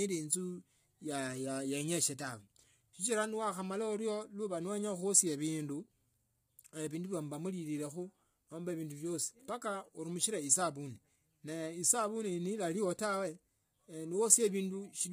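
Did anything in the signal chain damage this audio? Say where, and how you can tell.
Yes, and it sits at the codec stage, for the whole clip. The speech comes through rough and grainy, with a hiss-like fill between the harmonics and nothing at all above about 15.6 kHz. That's heavy low-delay AAC compression, likely AAC-ELD at a rate that sounds close to 24 kbps. Its short frames can't pin the pitch harmonics down cleanly, so at that bitrate the encoder smears noise into the gaps and gives up the top band.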